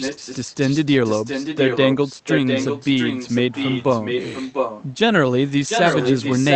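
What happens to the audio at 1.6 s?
At 1.6 s the speech is shadowed by a second, delayed copy of itself trailing about 0.70 s behind, only a little quieter than the direct sound, so the two overlap into a muddled doubling. This is an echo leak running from the start of the clip to 4.84 s. Its likely cause is a far end on a loudspeaker whose echo canceller let part of the microphone pickup through, sending that copy back down the call.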